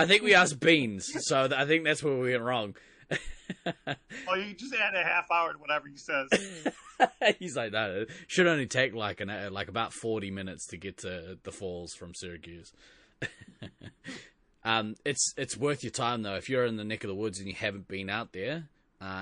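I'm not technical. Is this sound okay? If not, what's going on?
No. All the way through, the speech sounds watery and swirly, with a dull top end and metallic chirps on s sounds. This is likely MP3 compression squeezed too hard: the encoder cuts the treble and drops quieter detail, which flickers in and out.

From 8.68 to 8.71 s, just after "should only" and before "like an uh like", a short hiss arrives a split second before a sharp sound, blurring its start. That is pre-echo: the encoder spreads its noise across a short chunk of sound, so it leaks into the quiet before the attack.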